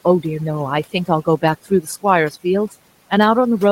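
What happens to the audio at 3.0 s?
At 3.0 s the gaps around the speech fall to near silence dotted with twinkling specks where the room noise, about 27 dB below the speech, should sit. The cause is overdone noise removal, present across the whole clip rather than just at this moment: the reduction is set so strong that frequency bands close to its noise estimate are pulled far down or off, taking the quieter parts of the speech with them.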